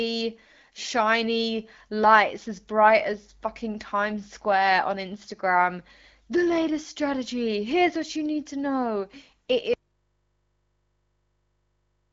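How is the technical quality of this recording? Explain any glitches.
The recording has one clear glitch: an audio dropout to a faint residue at the end. The audio passes through an AMR wideband (HD Voice) codec, with nothing above 7.5 kHz and light coding texture consistent with about 12.65 kbit/s.

At 9.74 s, just after "need to know it", the signal path likely broke while the input stayed live. Speech cuts abruptly to hum about 50 dB down, lasting until the end.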